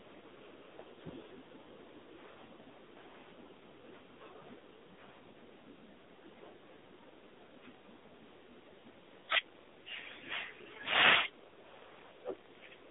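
AMR narrowband mobile codec damage runs through the whole speech clip: nothing passes above 3.7 kHz or below 250 Hz, and heavy coding artefacts make the voice buzzy and synthetic, which fits a low AMR-NB mode near 6 kbps modelling the vocal tract with very few pulses per frame.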